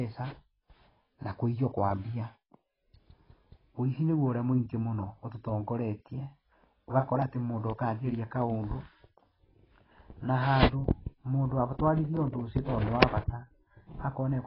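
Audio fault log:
Throughout, AAC compression: the speech is dull and smeared, with nothing above 5.6 kHz, so sibilants lose their edge and turn fizzy, while held vowels pick up a watery warble. That's likely a low-bitrate AAC-LC encode, and the damage is heavy enough to fit something around 16 kbps. Starved of bits, the encoder pulls its cut-off down and quantises each frame's spectrum coarsely, dropping or patching bands.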